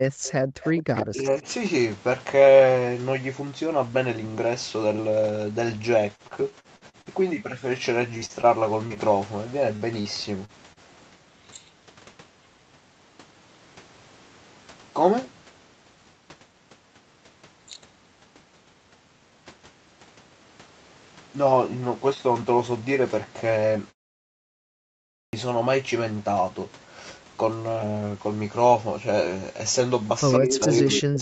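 From 0.0 to 0.24 s and again from 0.41 to 0.62 s, the background is gated by the echo canceller. The room sound falls by up to about 40 dB for roughly a fifth of a second each time and then comes back. The canceller pulled the microphone down while the loudspeaker played. This differs from a muted pause because it happens while the far side is active, not in silence.

Between these gates there is an echo leak. From 0.24 to 0.33 s a faint copy of the sound trails the original by 136 ms, about 20 dB down. From 0.62 to 1.06 s a stronger copy follows at 106 ms, about 10 dB down. The likely cause is a loudspeaker-side canceller failing to remove everything its microphone picked up and sending the rest back. Unlike reverberation, the copy arrives as a distinct, delayed repeat rather than a smooth tail.

From 1.1 to 1.45 s the talker's speech is suppressed in double talk, dipping by around 25 dB for roughly 200 ms while the other side is talking. 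The canceller likely could not separate the talker from the loudspeaker echo and turned both down. The talker's own voice dips, whereas the background gating earlier affected only room sound.

Repeated packet loss gives a choppy, robotic texture in three stretches. From 6.15 to 7.08 s there are seven gaps, the longest 49 ms, with 28% of the span patched. From 8.17 to 8.99 s there are five gaps, the longest 41 ms, with 18% patched. From 9.76 to 10.79 s there are four gaps, the longest 48 ms, with 16% patched. Each hole is filled by stretching the last sound, unlike the clean volume dips caused by suppression.

At 25.05 s, after a 1.2 s pause, the start is clipped. About 281 ms is swallowed while the output device wakes, so speech begins abruptly without its opening sounds. A muted pause, by contrast, returns in time and loses nothing.

Near the end, the echo leak returns from 30.31 to 30.66 s and from 30.92 to 31.00 s. 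It trails by 106 ms and sits only about 5 dB below the speech. Overlapping it, speech suppressed in double talk runs from 30.39 s to the end of the clip, cutting the talker by up to about 40 dB.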